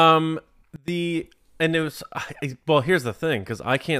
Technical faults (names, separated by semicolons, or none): sudden gain jump